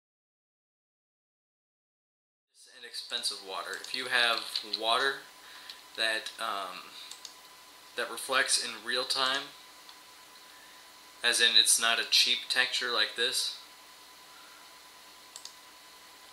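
No technical faults are audible: the signal holds steady, with only an intentional smooth fade-in rising from around 2.5 s to full level at 3.95 s, free of clicks or hard edges.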